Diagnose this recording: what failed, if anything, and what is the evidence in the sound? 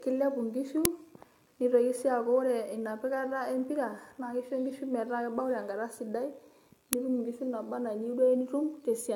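The speech sounds swirly, smeared and hollow, with blurred consonant onsets and nothing above 17 kHz. At the codec stage, this is likely generation loss: repeated AAC-LC encoding at 96 kbit/s, about four passes, each requantising on a shifted frame grid so the damage accumulates.

Two very short, loud cracks occur at 0.85 s and 6.93 s. This is an uninitialised buffer at the driver or buffer stage: stale memory played as samples, with burst lengths that fit blocks of about 128 and 64 samples.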